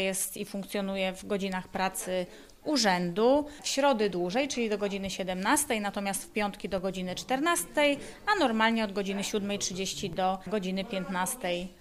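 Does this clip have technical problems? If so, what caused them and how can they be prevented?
Yes. Two DC steps occur, at 6.78 s and 10.13 s. Each time the waveform's zero line jumps by about -31 dBFS, producing a low thump, and the offset then decays through a 20 Hz high-pass. Prevent this by keeping converter calibration stable and DC-blocking inputs before switching.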